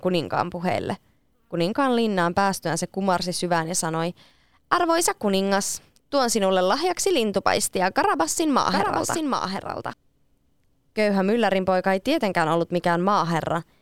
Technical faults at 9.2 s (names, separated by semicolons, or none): doubled audio track